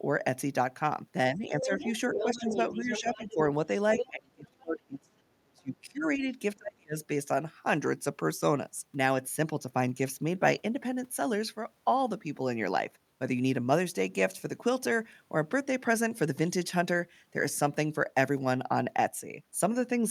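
From 1.31 to 1.86 s, the speech dips by about 10 dB. This is speech suppressed in double talk. Both sides were likely talking at once, and the echo canceller turned everything down. From 1.61 to 3.34 s, a second voice comes through, only a little quieter than the talker. This is the other side's voice leaking through. The loudspeaker signal was likely not fully removed from the microphone. From 2.1 to 3.38 s, during that leak, the talker dips again by about 10 dB. At 3.97 to 4.09 s, a short scrap of the other voice leaks in. The worst suppression follows, from 4.09 to 6.25 s. The talker drops by around 35 dB and nearly vanishes. From 6.57 to 6.97 s, a similar deep drop cuts the speech out again.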